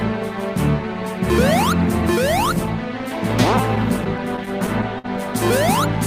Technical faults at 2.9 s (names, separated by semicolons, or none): none